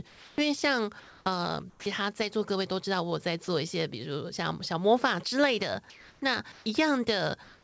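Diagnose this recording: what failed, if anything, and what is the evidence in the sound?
The failure sits in call processing, most likely the sender's voice activity detection with discontinuous transmission. Across the clip, the 8 kHz ceiling on the spectrogram fits the G.722 wideband codec in the call path.

Comfort noise in place of the background appears at 0.08–0.38 s, 1.00–1.26 s, 5.90–6.22 s, 6.52–6.66 s and 7.44–7.63 s. In each gap, the room tone, about 26 to 35 dB below the loud passages, gives way to a flat, textureless hiss that shifts by about 1 to 2 dB. On a spectrogram, these gaps show as smooth, evenly shaded blocks with no fine background detail. The receiver is likely synthesising noise while the sender transmits nothing.

Sound dropped by the voice detector occurs at 1.70–1.86 s and 3.44–3.48 s. Speech energy vanishes into the same steady noise: about 70 ms of real sound is lost in the first case and about 40 ms in the second, with the detector likely misjudging part of the sound as background. 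On the waveform, the speech envelope stops abruptly and is replaced by a low, uniform band. On the spectrogram, harmonics end with a hard vertical edge.

The onset is clipped by the voice detector at 7.60–7.63 s. Sound resumes without its soft lead-in, because about 40 ms of the beginning was replaced by comfort noise. The likely cause is the detector reacting late to renewed activity. On the waveform, the envelope jumps from noise floor to speech level with no rising ramp. On the spectrogram, energy appears at once across the band instead of building up.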